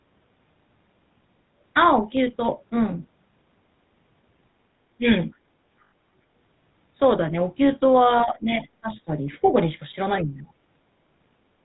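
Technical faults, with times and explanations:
Throughout, GSM full-rate codec: the speech has a buzzy, gravelly roughness and a dull, boxy sound with nothing above 4 kHz. The vocal tract is modelled and driven by a coarse, regularly spaced pulse excitation, which fits the 13 kbps full-rate codec.
4.98–5.05 s, 8.25–8.65 s, 8.81–9.11 s and 10.23–10.49 s, speech suppressed in double talk: the talker briefly dips by about 20 dB, 10 dB, 15 dB and 10 dB. The likely cause is an echo canceller turning the talker down while the other side spoke at the same moment.
5.84–5.92 s, lost GSM frames: for 80 ms the sound freezes into a rough, metallic ring. Missing frames were filled by repeating the settings of the last good one, and the 80 ms gap fits four 20 ms frames.
9.43–9.51 s, other side's voice leaking through: a faint scrap of a second voice sounds about 25 dB below the talker. The likely cause is loudspeaker sound from the far end that the echo canceller did not fully remove from the microphone.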